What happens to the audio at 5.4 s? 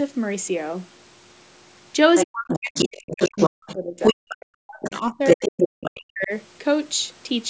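At 5.4 s two faults overlap. The first is speech suppressed in double talk, running from 2.25 s to 5.43 s. With both ends of the call active, the echo canceller likely could not tell the local talker from the loudspeaker echo and attenuated everything it picked up. The talker's voice is pushed down hard, at its deepest by something near 40 dB, so it thins and drops out in pieces across roughly three seconds, ending just after this moment.

The second is the other side's voice leaking through, from 4.83 s to 5.91 s. The far-end voice, played on the talker's loudspeaker, was likely not fully removed from the microphone signal. A second voice therefore sits in the recording at roughly the same level as the talker, overlapping the end of the suppressed stretch and continuing about half a second past 5.4 s. The 8 kHz band limit of the call's microphone processing is normal.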